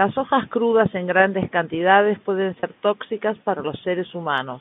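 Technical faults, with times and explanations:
2.60 to 2.63 s, packet loss with pitch repetition: about 30 ms of speech went missing, which fits three 10 ms packets. The receiver bridged the gap by repeating the last pitch period, so the sound briefly freezes into a held, slightly buzzy tone before resuming. On the waveform the gap appears as a run of repeated, evenly spaced cycles that fade in level. On the spectrogram the harmonics run dead flat across it, within the telephone band of roughly 150 Hz to 3.6 kHz.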